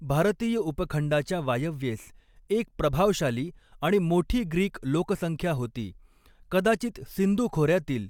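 Nothing here calls for comment, as the speech runs its whole course without any technical fault standing out.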